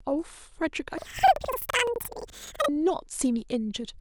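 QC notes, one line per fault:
0.98–2.69 s, planar audio read as interleaved. The speech jumps an octave higher, 12 semitones up, with a flutter at about 11.7 Hz. Each block stores all left samples, then all right samples. Here they are read as alternating pairs. So every block plays twice at double speed, first left, then right. The overall pace stays normal. The 85.33 ms block length fits a 4096-sample block. That repetition causes the flutter.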